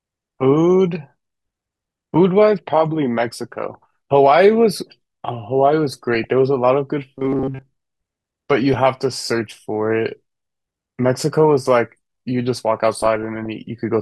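In this speech clip, weak DAB reception lets bit errors of a few tenths of a percent slip past error correction into the MP2 data, causing DAB burbling at 3.71–3.75 s, 5.92–6.33 s, 8.51–9.21 s and 13.02–13.47 s, where short blips of noise appear in single sub-bands. From 7.15 to 7.62 s, audio likely arrived too seldom and the player repeated short buffers, skipping most of the real signal. This produces a robotic, metallic buzz at 133 Hz, which fits a buffer of about 7.5 ms.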